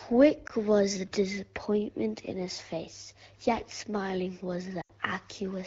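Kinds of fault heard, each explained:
Lost AMR speech frames: a brief warble at 0.47 s, before "was the disappointment in", and a drop to near silence from 4.81 to 4.91 s after "his face yet smiling", consistent with the wideband decoder losing one, then about four, frames and repeating earlier pitch and vocal-tract settings at falling gain.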